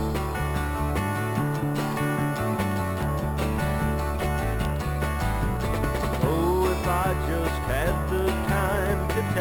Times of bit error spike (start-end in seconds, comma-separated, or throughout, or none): none